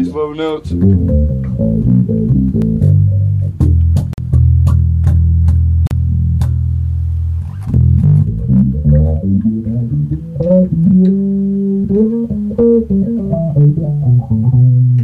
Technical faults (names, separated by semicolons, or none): block of digital silence